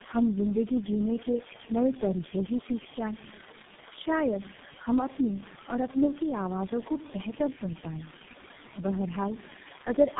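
This is a speech clip with two faults running its whole length. The first is an unreliable data bit. One bit in the sample data flips at random, adding same-sized spikes. They form a steady crackle and fizz that continues through the pauses. The second is tandem speech coding. The speech passed through four low-rate codecs in turn: iLBC, G.729A, GSM full rate, then G.723.1, with G.711 links between. Each re-coding degrades the last. The result is rough, muffled and warbly, with nothing above 3.7 kHz.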